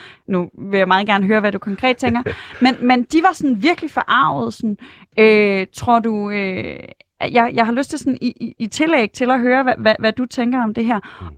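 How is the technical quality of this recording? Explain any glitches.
There is one glitch, a call bitrate drop from 3.03 to 5.13 s, right after "men men". When the call's bandwidth estimate fell, the encoder coded the speech more coarsely, which fits a fall from about 32 to 18 kbps. For roughly 1.5 s the speech sounds rough and watery until the bitrate recovers.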